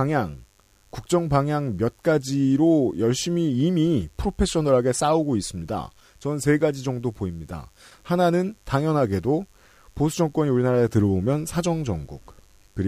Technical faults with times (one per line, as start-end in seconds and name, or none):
0.00-12.88 mains buzz